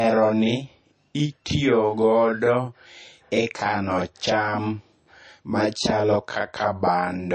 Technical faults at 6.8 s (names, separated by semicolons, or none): channel delay (doubling); MP3 compression